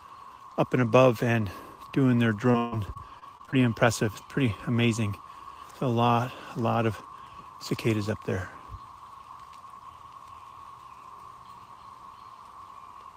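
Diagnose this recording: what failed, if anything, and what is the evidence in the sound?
Repeated packet loss in the network, 2.51 to 3.58 s. Seven gaps, longest 139 ms, are patched by extending earlier sound. The result is choppy and robotic.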